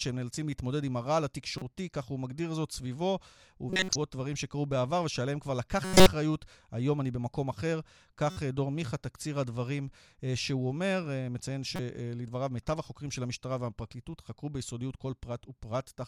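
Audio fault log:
1.58–1.62, 3.70–3.96, 5.84–6.09, 8.30–8.37 and 11.74–11.80 s: corrupt frame decoded. The speech gets short chirpy bursts where damaged compressed frames were played as if valid, so misread gains and codes put energy in the wrong frequency bands. The quick ones at 1.58 and 8.30 s sit low, around -25 dBFS. The longer ones at 3.70 and 5.84 s run about a quarter second, which suggests several frames in a row, and peak near -10 and -5 dBFS.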